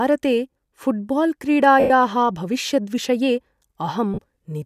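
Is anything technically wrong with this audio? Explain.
Yes, there are lost LE Audio frames in two spots. From 1.80 to 1.90 s, about 100 ms goes missing. The decoder covers it by replaying the last spectrum with random signs and fading it, so the sound smears into noise. Between 4.14 and 4.26 s, shorter dropouts scattered over 120 ms, the longest around 40 ms, add up to about 70 ms lost and smear the sound into noise in the same way.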